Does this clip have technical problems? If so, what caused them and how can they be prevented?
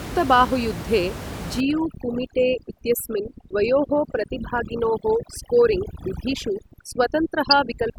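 Yes. From 1.60 s to the end, overdone noise removal: a reducer set too strong switches off frequency bands near its noise estimate, so room noise about 10 dB under the speech becomes twinkling specks. A spectrogram shows scattered isolated dots and gaps between phrases. Lighter reduction settings prevent it.

From 7.50 to 7.53 s, a corrupt frame decoded: flipped bits in a couple of compressed frames made the decoder put energy at wrong frequencies, producing an error peaking around -5 dBFS. It shows as a brief vertical smear on a spectrogram and a spike on the waveform. Error checking that conceals damaged frames instead of playing them prevents it.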